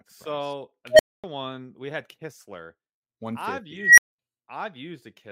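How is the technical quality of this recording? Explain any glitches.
The speech is marred by two unstable filter blowups. At 0.90 s a tone around 700 Hz swells over about 94 ms, clips, then drops to 245 ms of silence before "one we had". At 3.77 s a tone around 2 kHz builds over 206 ms and cuts out for 155 ms, ending at 4.13 s. A recursive filter's feedback ran away, the values overflowed, and the output went dead until the filter reset.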